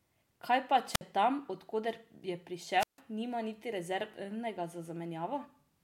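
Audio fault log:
0.92–1.01 s and 2.78–2.99 s, wireless microphone squelch dropout: each event is a short burst of rising hiss followed by a hole of near silence, about 56 ms at 0.92 s and 150 ms at 2.78 s, before the speech returns. The FM radio link from the transmitter fades, noise climbs as the received signal weakens, and the receiver's squelch gate then mutes the output entirely until signal strength recovers and audio is passed again.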